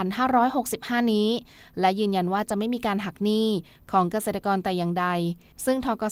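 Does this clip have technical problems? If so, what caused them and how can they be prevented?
Yes: a lost packet rebuilt from error correction, 2.57 to 2.59 s, sounds briefly rough and noisy without a gap. A 20 ms low-bitrate copy replaced it, which fits one lost packet. Prevent this by reducing network packet loss.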